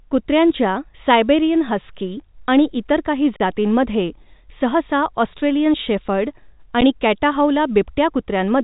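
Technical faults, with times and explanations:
2.40 s, 3.36–3.40 s and 6.81 s: underrun with held sample. The output buffer ran dry for 10 ms, 38 ms and 10 ms, and the converter held its last value, so the speech flattens to a frozen level. Playback then resumed where it stopped, so each gap closes without a sharp click. The G.711 mu-law telephone band, cut off near 3.8 kHz, sits under all three.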